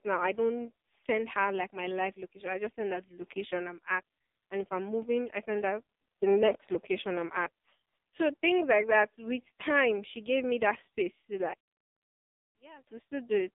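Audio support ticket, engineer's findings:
Whole clip, speech band-limited to roughly 200 Hz to 3.7 kHz, nothing above. Buzzy, synthetic voice with heavy codec damage. AMR narrowband mobile codec on the path. Pulse-driven vocal-tract model at a low mode; artefact level fits about 5.9 kbps.

11.54 to 12.87 s, voice drops about 26 dB to a faint residue, then recovers. Likely one channel inverted: polarity flip on one leg, so the centred voice cancels when summed to mono and only the inter-channel difference survives.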